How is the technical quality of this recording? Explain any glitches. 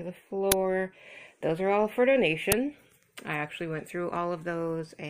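Two brief glitches mar the recording. At 0.52 s and again at 2.52 s there is a sharp, loud crack, each lasting about 5.8 ms. These are uninitialised buffer faults: a block was played before audio was written to it, so leftover memory came out as samples, which fits a 256-sample buffer.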